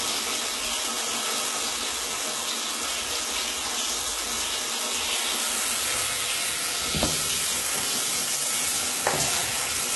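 Everyday sounds run the full length of the clip with dull, smeared highs and the swirly, watery texture of a very low-bitrate codec. Nothing sits above 11.8 kHz, so a spectrogram shows a hard flat ceiling there for the whole clip, with blotchy, patchy energy below it, while the waveform looks normal. This is likely low-bitrate audio saved at a high bitrate: the damage fits a heavily compressed source, perhaps around 16 kbit/s, later re-encoded as a high-rate MP3 that cannot restore the lost detail.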